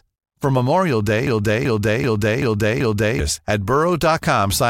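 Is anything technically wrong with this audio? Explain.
Yes. A broken-record loop runs from 1.27 to 3.20 s. A 0.38 s fragment of the speech plays five times back to back, each repeat identical, so the phrase stutters mechanically instead of moving forward. The likely cause is a stall in the player, encoder or stream, which kept resending the last fragment it held while new audio stopped arriving. Whatever should have been heard in those two seconds is missing.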